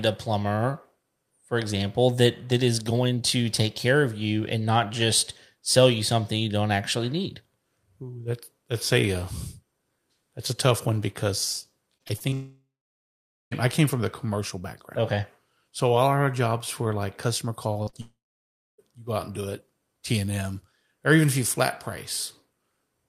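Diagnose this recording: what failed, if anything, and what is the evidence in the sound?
The trouble is on the network side, and it starts with repeated packet loss (robotic sound) from about 11.97 to 12.34 s. Five small holes land in that stretch, the longest around 27 ms, and concealment ends up covering roughly a third of it. The receiver keeps extending the last bit of speech to bridge each gap, so the speech turns choppy right before things get worse.

That run rolls straight into a long network dropout from 12.34 to 13.53 s. The concealment extends the last sound briefly, fades, and leaves roughly 0.86 s of silence before the speech picks up at "I came from the", with the missing stretch simply gone. The same thing happens again from 18.01 to 18.80 s, with about 0.63 s of dead air. A stalled or interrupted stream is the likely cause for both.

Just before that second dropout there's a cluster of short concealed packet loss: 17.73 to 17.77 s (about 20 ms), then 17.83 to 17.89 s and 17.89 to 17.95 s (about 40 ms each), right after "jobs were like customer". 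Each hole gets patched by continuing the previous sound and blending back in, so you hear brief smears or wobbles rather than gaps, and short sounds in there can get swallowed.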